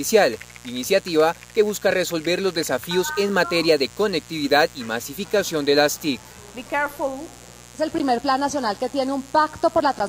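Mains buzz runs through the whole recording, a steady, raspy buzz sitting about 25 dB below the sound. It comes from switching spikes entering twice per 60 Hz mains cycle, probably through a dimmer, rectifier or unshielded cable, which spreads harmonics of 60 Hz up into the kilohertz range.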